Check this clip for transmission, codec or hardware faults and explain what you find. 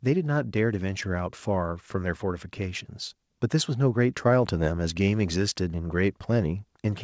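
One fault turns up, heard against a band-limited call path with nothing above 8 kHz, which fits a G.722 wideband codec at 64 kbps. Microphone volume stepped up at 1.02 s: the call software raised input gain in one jump, making speech and background together about 3 dB louder.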